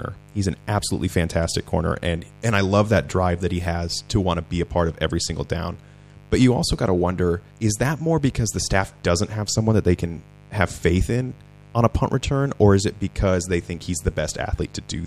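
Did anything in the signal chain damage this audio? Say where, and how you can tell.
Yes, there's mains buzz running under the speech from start to finish, and it got in at the analogue wiring stage. You can hear a steady, raspy buzz sitting well below the speech, somewhere around 25 dB down, built on a 50 Hz mains supply. The raspiness is the giveaway: sharp switching spikes from something like a dimmer, a rectifier or a missing shield land twice per cycle, so harmonics stack up well into the kilohertz range rather than staying a clean low hum.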